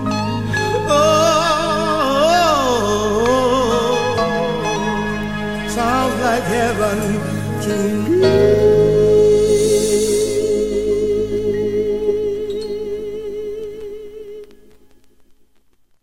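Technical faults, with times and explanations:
No technical faults can be heard anywhere here.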